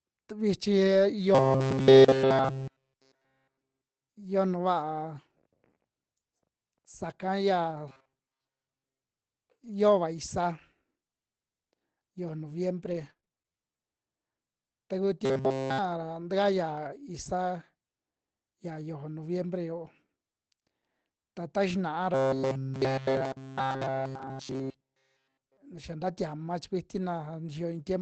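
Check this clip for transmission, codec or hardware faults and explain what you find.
Four kinds of fault are audible in this speech, carried over an Opus call path limited to about 8 kHz.

Robotic sound from repeated short buffers, at 1.35–4.09 s, 7.89–9.01 s, 15.25–15.79 s and 22.14–25.57 s: the speech becomes a rigid metallic buzz at 133 Hz. This is likely from a short buffer of about 7.5 ms being replayed while the real audio is skipped.

Scattered short gaps, from 10.19 to 13.52 s: about ten brief ticks and smears, none longer than about 30 ms. Lost or late packets were each patched by extending the preceding sound.

Jitter buffer slow-down, from 13.53 to 13.78 s: the speech drags at 82% speed without dropping in pitch. The receiver stretched the audio by 55 ms to rebuild its reserve.

Lost packet rebuilt from error correction, at 17.26–17.40 s (80 ms), 23.74–23.80 s (40 ms) and 25.76–25.90 s (80 ms, just before "nta tiama"): these stretches sound briefly rougher and noisier. 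Low-bitrate backup copies carried in the following packets replaced the lost audio.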